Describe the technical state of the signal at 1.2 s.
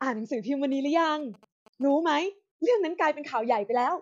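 GSM signalling bursts are present at 1.2 s, within a span running from 0.72 s to 2.15 s. A nearby 2G phone is exchanging short groups of radio bursts with the network, and the audio circuitry rectifies that RF energy into sound. Over the speech it comes through as a galloping dit-dit-dit of short buzzes at a 217 Hz repetition rate, sitting roughly 25 dB below the speech.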